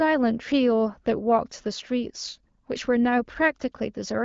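No technical faults can be heard in this speech.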